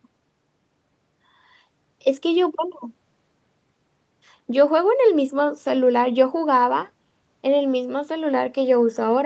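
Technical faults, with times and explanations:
Nothing stood out on listening to this speech, which comes through a call's microphone processing and codec path with its content capped around 8 kHz as that path normally leaves it.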